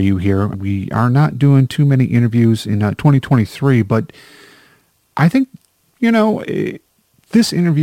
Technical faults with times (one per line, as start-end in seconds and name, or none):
0.00-7.83 crude rate conversion